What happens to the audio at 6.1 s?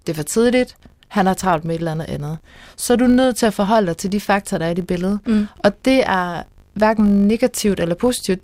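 At 6.1 s the speech carries a fine 50 Hz buzz from a filter restarted on every block, a fault running through the whole clip rather than beginning there. Each processing block starts the filter from silence, so a tiny transient is produced at every block boundary, fifty times a second, which points to blocks about 20 ms long. Unlike mains hum at the same frequency, this buzz is a train of ticks that grows and fades with the speech level and vanishes in pauses.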